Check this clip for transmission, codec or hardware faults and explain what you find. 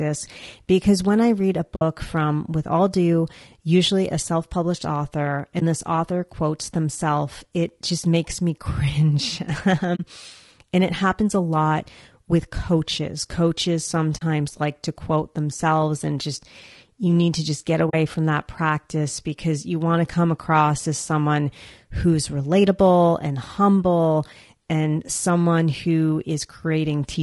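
Two faults are audible in this speech: constant codec roughness and five short dropouts.

Throughout, the speech sounds rough and grainy, likely from low-delay AAC compression (AAC-ELD) at a rate around 32 kbps. Its short frames resolve pitch harmonics poorly, so noise fills the gaps between them. A spectrogram shows smeared harmonics and a thin, synthetic-looking top band.

AAC frame loss with muting occurs at 1.75 s (60 ms), 5.59 s (20 ms), 9.95 s, 14.17 s and 17.89 s (40 ms each). Lost frames were decoded as silence, and overlapping windows fade the sound out and back in. These are soft-edged holes, with the single lost frame at 5.59 s a brief dip, seen as tapered waveform gaps and blank spectrogram columns.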